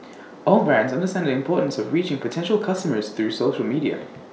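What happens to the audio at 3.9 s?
Nothing goes wrong at 3.9 s; the speech carries on intact through that moment, with no dropout, click, distortion or other fault to be heard.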